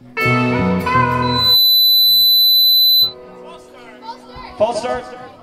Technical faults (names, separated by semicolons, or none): loudspeaker feedback squeal